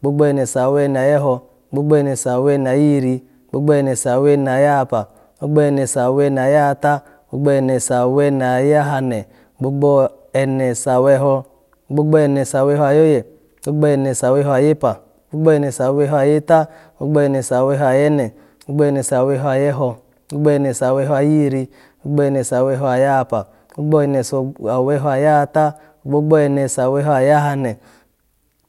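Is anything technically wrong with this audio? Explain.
No, nothing technically wrong can be heard in this speech recording. There is nothing here that points to a problem in how the audio was captured or processed.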